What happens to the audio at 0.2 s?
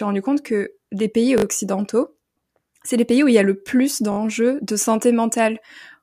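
Nothing goes wrong at 0.2 s; the speech carries on intact through that moment, with no fault to be heard.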